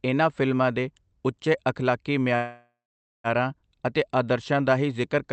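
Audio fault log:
2.35–3.27 s, call audio freeze: packets likely stalled, draining the jitter buffer after "ਫਿਲਮਾਂ ਦੇ ਉੱਚੇ ਅਖਲਾਕੀ". A fading fill sinks into 0.48 s of silence, then speech resumes intact, 0.89 s late.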